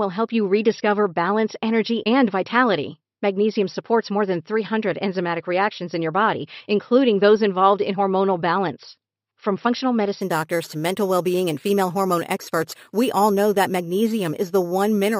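From 10.21 s to the end at 15.20 s, imaging from sample-and-hold upsampling: each sample was repeated without smoothing, which fits a 12 kHz source raised to 48 kHz. Mirrored speech spectra fill 6 to 12 kHz about 20 dB down, giving a metallic fizz that tracks loudness.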